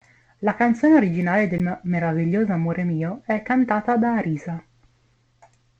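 A CD skip in the playback of this speech recording: the laser lost its track and landed on another turn of the disc's spiral. Just after "canzone originale", at 1.58 s, the player mutes very briefly, ticks, and resumes from a different point.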